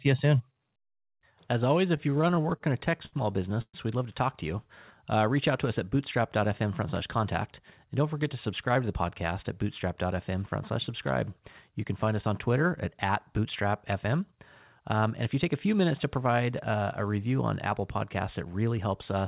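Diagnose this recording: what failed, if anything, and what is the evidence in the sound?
The network stage, through the jitter buffer of a narrowband call path, produced repeated stalls (stutter) between 1.97 and 3.76 s, just before "we'd love to talk". The buffer ran dry 16 times, and the receiver held the last sound through each gap, the longest lasting 119 ms, so about a fifth of that stretch is filler. Nothing is cut away, which separates this from packet loss. The audio drags and hiccups instead of having holes in it.

Jitter buffer speed-up occurs in three spans: 6.41 to 7.19 s, right after "out to us at", then 14.04 to 15.46 s, leading into "a few minutes to", and 17.81 to 18.79 s. Each time, the buffer held too much audio and shed short pitch-period slices, about 50 to 70 ms per span. Those spans run 5% fast at unchanged pitch, which rules out a resampling or clock-rate error. Those would shift pitch along with speed. 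Throughout, nothing lies above 4 kHz, which points to a G.711 call codec.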